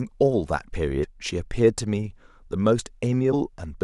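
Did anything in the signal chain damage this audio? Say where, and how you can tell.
Yes. At the codec stage there's damaged data in the compressed stream, heard as short glitches at 1.02 to 1.05 s and again at 3.32 s. Corrupted bytes there make the decoder misread frames and lose sync until it finds the next header.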